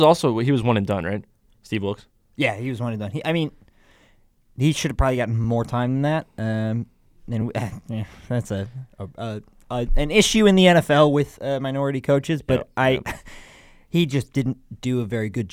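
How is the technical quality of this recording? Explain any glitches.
Two brief underruns with held sample interrupt the speech, at 5.44 s and 7.41 s. At each, the output buffer ran dry for about 1.3 ms, a gap of 64 samples, and the converter held its last value until data resumed. On the waveform this appears as a short flat plateau. On a spectrogram it is a faint vertical line. Playback resumes where it stopped with essentially no audio lost, so each is heard as a brief stop in the sound.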